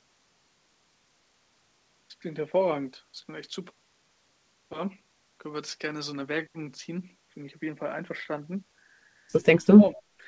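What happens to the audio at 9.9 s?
At 9.9 s the speech is caught in a dip from 9.63 to 9.99 s. It is turned down, about 25 dB down at its deepest, for around 200 ms in total. This is speech suppressed in double talk. An echo canceller likely mistook the talker for loudspeaker echo while both sides spoke and turned it down.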